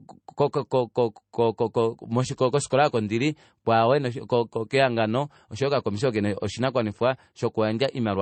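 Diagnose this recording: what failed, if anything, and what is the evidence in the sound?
The failure is at the codec stage, and it lasts the whole speech recording: the energy stops dead at 8.3 kHz, and the swirly, smeared texture of heavy MP3 compression is present throughout. The likely cause is low-bitrate audio saved at a high bitrate. The band-limiting fits an MP3 of around 32 kbit/s, later re-encoded at roughly 192 kbit/s, which could not restore the discarded content. A spectrogram would show a flat, hard ceiling at 8.3 kHz with nothing above.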